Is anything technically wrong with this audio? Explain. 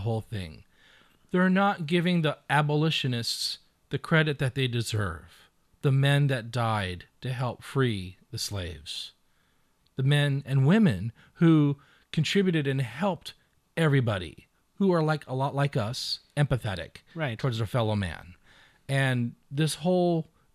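No, nothing technically wrong is audible anywhere in this speech recording.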